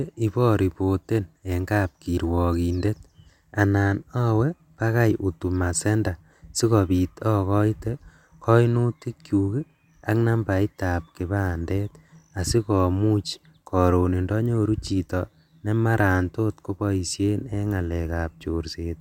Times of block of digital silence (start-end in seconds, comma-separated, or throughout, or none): none